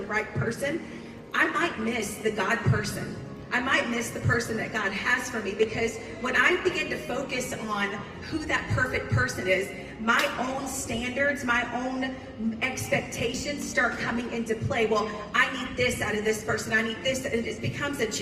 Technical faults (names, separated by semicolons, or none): none